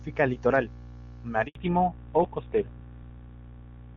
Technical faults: handover gap; fallback to narrowband

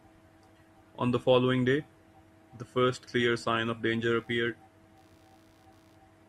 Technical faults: computer activity noise

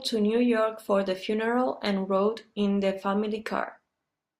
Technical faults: none

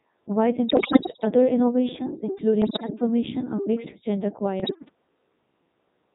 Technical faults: Codec 2 vocoder; bit errors on digital voice radio

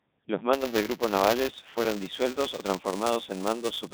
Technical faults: Codec 2 vocoder; buffer tearing

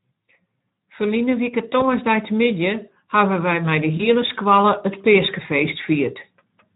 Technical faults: Speex codec; VoIP packet loss concealed by the speech codec

